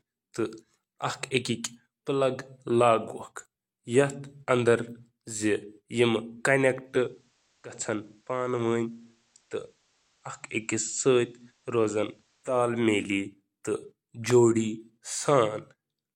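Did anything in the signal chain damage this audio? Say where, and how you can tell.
Yes, there is digital radio blending to analogue in the receiver from 6.81 to 12.59 s. A 187 ms cross-fade to FM drops the level about 3 dB and adds faint hiss.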